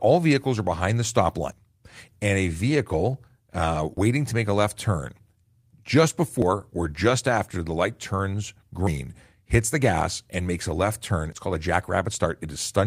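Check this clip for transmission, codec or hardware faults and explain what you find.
The speech has one fault, repeated five times: audio missing between chunks, at 1.52, 3.97, 6.42, 8.87 and 11.32 s. Each time around 50 ms vanishes and the two sides butt together, likely a recorder dropping audio as it switches to the next 2.5 s chunk. You hear a brief skip, and the waveform and spectrogram show an abrupt seam with no silent gap.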